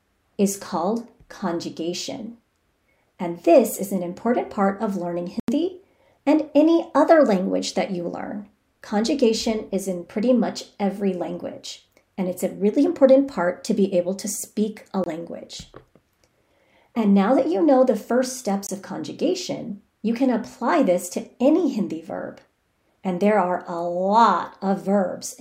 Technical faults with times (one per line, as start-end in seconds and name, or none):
5.40-5.48 block of digital silence
15.04-15.06 block of digital silence
18.67-18.69 block of digital silence